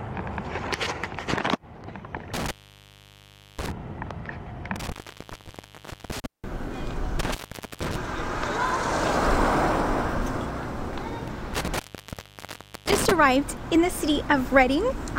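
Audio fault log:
2.34–3.72 s, 4.76–6.26 s, 7.19–7.96 s, 11.54–13.12 s, intermittent contact: a loose connection repeatedly opens for about 1.1, 1.2, 0.46 and 1.06 s, cutting the sound out with crackle at each edge and faint hiss in the gaps.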